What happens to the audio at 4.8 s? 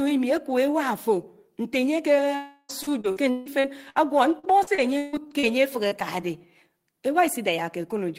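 Repeated packet loss (robotic sound) runs from 4.39 to 5.45 s. Six gaps arrive in quick succession, the longest 150 ms. Each is patched by stretching the preceding sound, which covers roughly a third of the stretch, so the speech turns choppy, with pieces missing.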